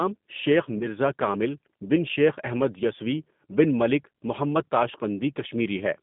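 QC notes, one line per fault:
throughout, G.729 codec: speech carried at 8 kbit/s within 150 Hz to 3.6 kHz, plainly rough and synthetic from pulse-rebuilt excitation, beyond mere band-limiting.
0.79–0.88 s, VoIP packet loss concealed by the speech codec: a gap fitting two lost 10 ms frames is filled with a fading extrapolation instead of silence, then weak recovery.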